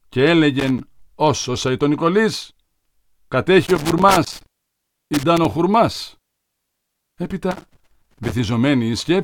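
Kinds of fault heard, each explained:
Loose connector crackle: Irregular bursts of scratchy crackle break into the speech three times, briefly from 0.59 to 0.80 s, for nearly two seconds from 3.66 to 5.45 s, and again from 7.51 to 8.32 s. A worn or dirty contact somewhere in the cable or jack path is making and losing connection as it shifts, chopping the signal on and off in quick succession.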